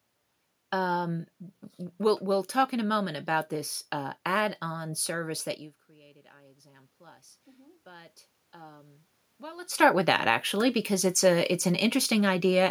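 Speech, with automatic gain rising from 7.83 s to 11.24 s. The input drops by about 22 dB, and the gain control responds by slowly raising its gain by about 5 dB, so the voice and the room noise swell together over roughly three seconds. On a waveform the envelope climbs steadily across that span. On a spectrogram the background noise floor brightens along with the speech instead of holding steady. The talker moving near 5.5 s and 9.5 s causes separate, natural level shifts.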